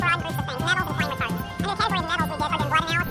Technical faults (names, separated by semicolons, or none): wrong sample rate